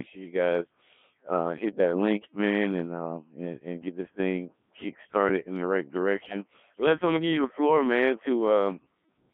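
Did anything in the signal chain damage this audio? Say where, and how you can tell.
Yes. Throughout, the speech sounds robotic and buzzy, confined to roughly 150 Hz to 3.4 kHz, with heavy smearing. That is the Codec 2 vocoder at the codec stage: only pitch, voicing, energy and envelope survive, and the decoder rebuilds the speech from sine waves, which fits its 1.3 kbit/s mode.

From 6.20 to 6.36 s, just after "started in the right", the synthetic speech jumps abruptly in pitch and tone colour into a brief warbling burst. These are bit errors on digital voice radio, a network-stage fault. An error rate of around two percent corrupted frame parameters, consistent with about two frames hit.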